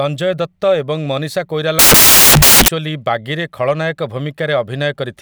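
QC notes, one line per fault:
1.79–2.68 s, samples built from the wrong bytes: right after "ଦତ୍ତ ଏବଂ ମନୀଷା" the speech turns into loud, harsh broadband noise for about 0.9 s. Each sample's bytes are assembled misaligned or swapped, so the rapidly changing low-order bits dominate every value.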